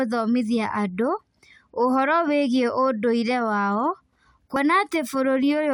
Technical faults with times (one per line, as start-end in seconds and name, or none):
4.56 compressed frames skipped